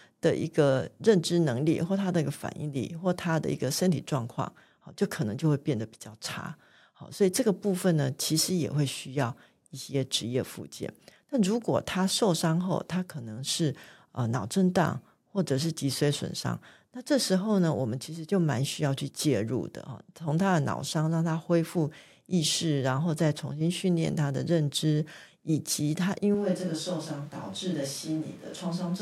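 A switch to a distant microphone occurs at 26.35 s and lasts to the end of the clip. The speech turns suddenly roomy and hollow, drops by about 5 dB, and carries more room noise, sitting only about 25 dB below the speech. The most likely cause is that the close microphone's signal failed or was dropped, leaving a microphone farther away, such as a camera's, to capture the speech along with the room.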